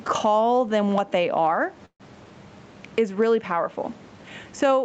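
Throughout the speech, the level pumps, a swing of roughly 15 dB. This is gain pumping, likely from far too much input gain with a fast limiter clamping down. On a waveform, the envelope looks flattened.

Right after "them what they are", from 1.85 to 2.02 s, the sound stalls in a call audio freeze, likely from late packets draining the jitter buffer. A buzzy continuation of the last sound fades into about 80 ms of silence, then the speech resumes where it stopped. The spectrogram shows a smeared, fading band, then a blank gap. About 144 ms of delay is added and nothing is lost.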